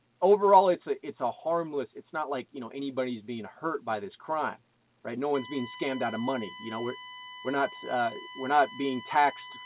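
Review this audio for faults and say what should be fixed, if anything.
USB whine comes in at 5.34 s and runs to the end at 9.65 s: a steady 1 kHz tone about 15 dB below the audio, from 1 ms USB frame current leaking through power or ground. Fix it with a powered hub, a ground-loop isolator, or better-shielded USB cabling. The top end stopping near 4 kHz fits the narrowband call codec and isn't a fault.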